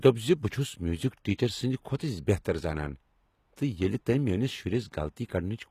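Speech throughout, with plainly audible HE-AAC compression damage, likely from a low-rate HE-AAC encode that fits roughly 20 kbps. The treble is rebuilt from copied lower bands rather than coded, so sibilants sound gritty and lispy, and nothing remains above 14.9 kHz.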